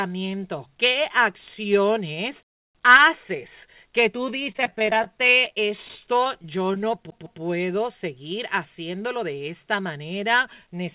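From 4.47 to 6.97 s there is repeated packet loss with robotic sound. More than two dozen short holes appear, none longer than about 22 ms. Each is patched by stretching the last sound. About 11% of the stretch is concealed. It sounds choppy and robotic.

From 7.10 to 7.42 s the sound behaves like a CD stuck on one turn. A 156 ms piece plays twice in a row. There is a brief mute at each jump back. The result is a quick, even stutter, like a skipping disc.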